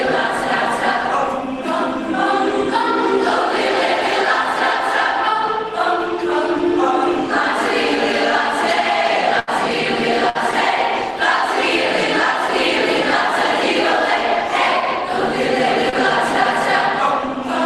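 At 9.39 to 9.49 s and again at 10.29 to 10.37 s, there is a burst of packet loss: consecutive stretches of the stream failed to arrive in time for playback. The receiver extended the last good sound to cover each hole, about 79 ms the first time and 55 ms the second, fading it as it went. Each gap is heard as a brief held buzz or fading hiss before the sound picks up again slightly ahead, with roughly 80 ms and 60 ms of material gone.

At 15.89 to 15.94 s, a short concealed packet loss occurs. A smaller piece, about 40 ms, missed the decoder's deadline, and about 30 ms of synthetic continuation was generated from the preceding sound and then crossfaded back into the real signal. The result is a quick smear or slight wobble rather than an audible dropout, with a sliver of the original sound quietly missing.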